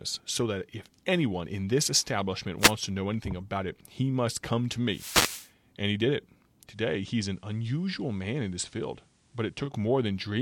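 At 2.59 to 2.73 s and again at 4.89 to 5.51 s the speech is hit by a wireless microphone noise hit. Reflections of the transmitter's FM signal cancel at the receiver, so the carrier fades and receiver noise rises through the audio. The first is brief. The second, over half a second long, is longer. Unlike codec or dropout damage, these sound like radio noise washing over the speech.

From 6.67 to 9.74 s the sound shows digital radio blending to analogue. The receiver lost its digital stream and cross-faded over 120 ms to the station's FM broadcast, then back. During that stretch hiss sits roughly 40 dB under the speech, and the level drops by about 2 dB. This differs from the noise hits because it has smooth crossfades at each end and a steady, hissier stretch, not sudden static bursts.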